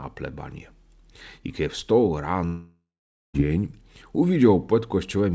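Long network dropout, 2.46 to 3.36 s, after "I kiedy wstał": a fading buzz gives way to near-silence, likely lost packets concealed, and the audio resumes without that stretch.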